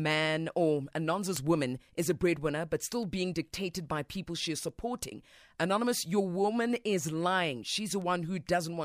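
From about 0.12 s right through to the end, the speech carries word clock ticks: roughly twenty sharp clicks of uneven strength, around every 0.4 s. The receiving clock isn't locked to the sender, drifting around 50 ppm, so a single sample slips at each crossing.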